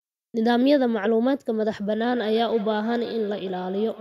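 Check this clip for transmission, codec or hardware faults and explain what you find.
One fault is present: feedback echo between two devices, from 2.16 s to the end. Each word returns about every 150 ms, thinner and ringing, at about 19 dB below the speech. A second device's speaker feeds the microphone, and the local echo canceller ignores it.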